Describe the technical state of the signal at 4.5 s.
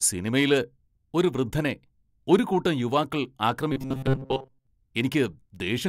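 At 4.5 s the stream is likely starving for new audio, so the software keeps replaying a roughly 7.5 ms buffer while most of the real signal is skipped. From 3.72 to 4.67 s this robotic sound from repeated short buffers imposes a rigid 133 Hz metallic buzz.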